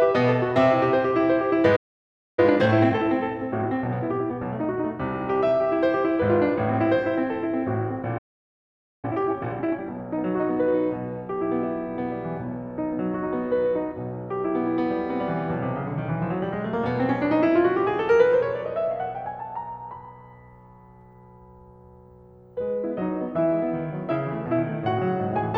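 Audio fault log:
1.76–2.39 s, playback stall: The player likely ran short of buffered data or had its output thread blocked. The music cuts out in mid-flow for about 0.62 s of silence, then resumes from the point where it stopped.
2.39–4.85 s, time-compressed catch-up: To clear the backlog left by the stall, the player trims small slices and cross-fades across the joins, running at 1.25 times normal speed. The music sounds hurried at unchanged pitch.
8.18–9.05 s, playback stall: A second starvation or blocked output thread is the likely cause. The music drops to silence for about 0.85 s, a longer gap than the first, before picking up again where it broke off.
9.05–10.75 s, time-compressed catch-up: The player works off this larger backlog more aggressively, cutting and cross-fading short pieces to reach 1.5 times normal speed. The music rushes noticeably at its original pitch.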